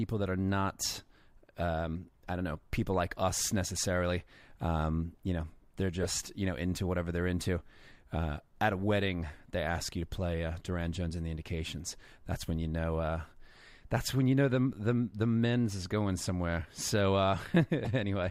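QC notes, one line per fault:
6.02–6.06 s, 13.25 s and 17.84–17.89 s: corrupt frame decoded. Each is a short chirp or squeaky noise burst lasting a few codec frames. The first, between "you know they're" and "you know into whatever", and the last are fairly loud. The one at 13.25 s is much quieter. Flipped bits in the compressed data made the decoder rebuild those frames with wrong gains and codes, putting energy at the wrong frequencies. Unlike a click or a dropout, each burst lasts about as long as the damaged frames.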